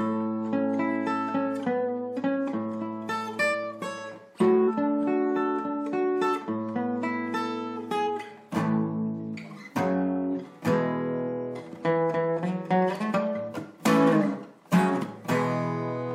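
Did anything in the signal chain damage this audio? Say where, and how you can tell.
Yes, at the codec stage: compressed frames skipped. The audio jumps forward at 3.51 s, 4.67 s and 8.06 s, losing roughly 150 ms, half a second and 200 ms. The jumps fit whole frames of about 46 ms.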